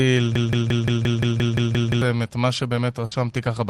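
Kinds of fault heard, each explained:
Broken-record loop: From 0.35 to 2.02 s a 174 ms slice of speech repeats exactly ten times back to back, likely a stalled player or stream resending its last buffer. On a spectrogram identical blocks tile side by side, and the speech that belonged there is gone before "את מה".
Burst of packet loss: Just after "את מה", from 3.05 to 3.13 s, about 60 ms of audio is missing and the receiver fills the gap by extending and fading the last sound. The waveform shows a smooth decaying stretch, then an abrupt resumption further on.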